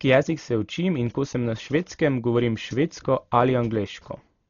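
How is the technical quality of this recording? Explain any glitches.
The quality is poor: throughout the speech, the sound shows heavy damage from what is likely Dolby Digital compression at a very low bitrate, which fits roughly 32 kbps. The encoder narrows the band, leaving nothing above about 6.9 kHz, and starves many frequency lines of bits, which the decoder fills with noise, so the voice sounds dull with a rough, fluttering texture.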